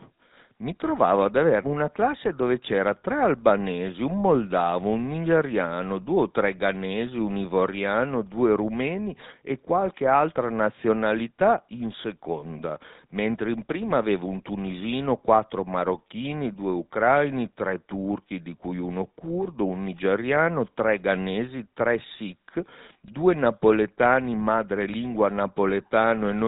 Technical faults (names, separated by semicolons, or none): GSM full-rate codec